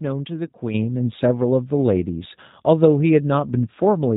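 A speech recording that sounds narrow and slightly rough and synthetic throughout, with nothing above 4 kHz and a buzzy, reconstructed texture. That points to an 8 kbit/s G.729 codec, which rebuilds each 10 ms frame from a vocal tract filter, a pitch predictor and a few pulses rather than preserving the waveform. At 0.74 s the speech and the background noise jump up together by about 8 dB and stay louder to the end. This sudden gain jump is likely a digital gain change applied instantly, without any ramp.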